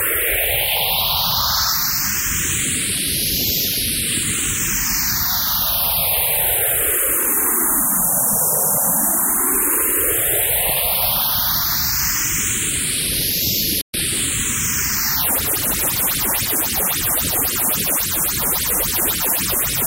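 At 13.81 s the sound cuts out for about 124 ms, then carries on: a playback stall, likely the player starving for data or its thread getting blocked.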